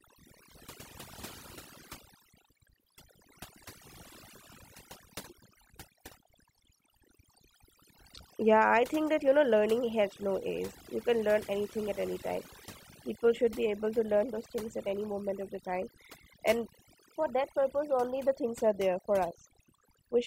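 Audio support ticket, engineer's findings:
Overdone noise removal across the whole speech clip. Background drops and breaks up into twinkling specks. Denoiser set too aggressive, cutting bands near its noise estimate.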